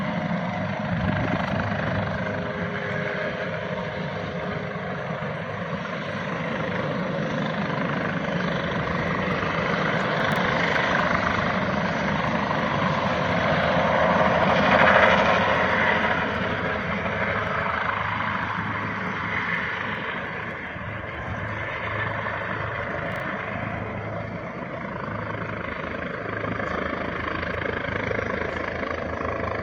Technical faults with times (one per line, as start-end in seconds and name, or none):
0.12-29.62 clock slip clicks
10.20-10.36 chunks out of order
23.12-23.20 chunks out of order